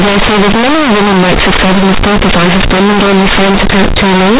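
From the first moment to the end, the speech is hit by companded audio read as linear. The bytes were A-law encoded but get played back as plain linear 8-bit samples, with no expansion step. Every sign change throws the output across roughly half its range, so soft passages come out as loud as strong ones. The result is harsh, buzzy, overdriven distortion with heavy noise filling the pauses, all sitting inside the G.711 telephone band that stops at 4 kHz.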